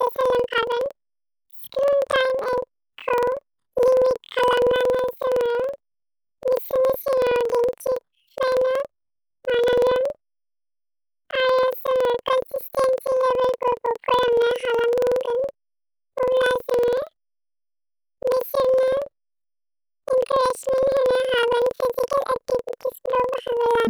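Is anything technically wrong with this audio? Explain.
Yes. Throughout the clip, planar audio is being read as interleaved. Each block stores all left samples, then all right samples, but playback treats them as alternating left-right pairs. So each block plays twice at double speed, left half then right half. Overall timing stays correct. The speech sounds an octave high, with a flutter at about 21.5 Hz. That repeat every 46.44 ms fits a 2048-sample block.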